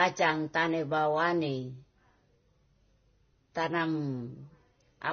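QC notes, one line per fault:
Throughout: transcoding between lossy codecs. The speech carries several overlapping kinds of swirl and smearing, with nothing above 6.5 kHz. This likely points to low-rate Vorbis, AAC and MP3 passes in turn. A single codec would leave only one artefact texture.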